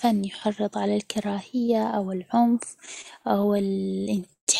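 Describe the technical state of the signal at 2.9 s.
The speech drags from 2.86 to 4.49 s: repeated stalls (stutter), as late packets kept emptying the jitter buffer, holding the last sound.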